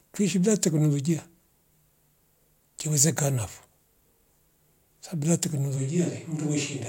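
Right after "sabu bila" at 5.78 s the voice goes roomy and hollow, thinner in the bass, about 5 dB quieter, with faint room noise coming in. That's likely a switch to a distant microphone, and it stays that way to the end.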